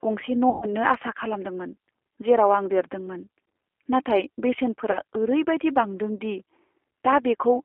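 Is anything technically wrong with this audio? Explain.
Yes. A G.729 codec is audible across the whole clip: the speech sounds narrow, slightly rough and synthetic, confined to roughly 300 Hz to 3.4 kHz. The decoder rebuilds each short frame from a vocal-tract filter, pitch predictor and a few pulses, which fits 8 kbit/s.

VoIP packet loss concealed by the speech codec occurs from 0.50 to 0.70 s, before "आसा खालामदोंमोन जेराव आं", and from 4.91 to 4.99 s, before "ओरैबायदि बांदों दि". Each gap turns into a fading buzzy tone or coloured noise, and the voice stays weak or distorted afterward. The decoder stretched its last pitch and filter while lowering the gain.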